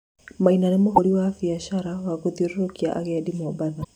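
A brief glitch cuts through the speech from 0.93 to 0.99 s, just before "biashara wa", and a second, similar blip comes from 3.80 to 3.85 s, each lasting about 50 to 60 ms. Both are damaged data in a compressed stream: bytes in the encoded file were lost or corrupted there, so the decoder misread those frames, lost sync and produced garbage until it found the next valid frame header.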